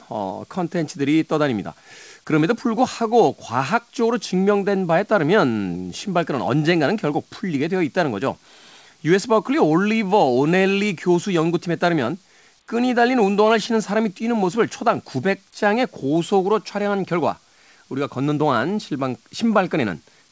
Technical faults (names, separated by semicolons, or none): none